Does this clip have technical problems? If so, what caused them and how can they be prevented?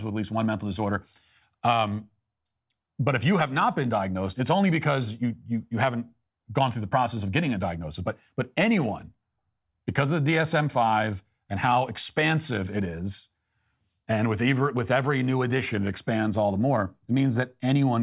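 No, there are no technical problems in this speech clip. With nothing going wrong, there is no cause to trace and nothing that needs preventing.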